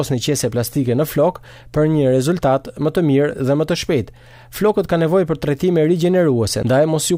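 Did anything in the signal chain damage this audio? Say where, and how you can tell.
No, no stage in the chain audibly damaged this.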